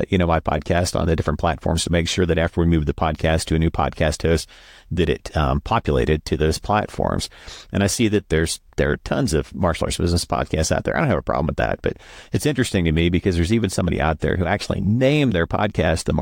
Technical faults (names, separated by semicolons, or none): none